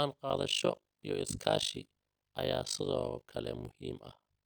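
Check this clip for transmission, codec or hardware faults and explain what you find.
There is one fault: overlap-add ripple, running from 0.3 s to the end of the speech clip. The audio was split into windowed frames and rejoined with an overlap whose window gains do not add up to a constant, so the level dips once per frame, around 50 times a second. The swing is deep, about 60 dB, nearly silencing each trough. It sounds like a harsh, buzzy flutter, a robotic tremolo chopping the speech from 0.3 s onward.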